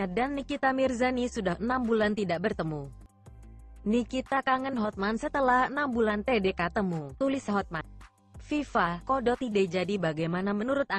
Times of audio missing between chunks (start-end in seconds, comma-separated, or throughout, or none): 3.06, 7.81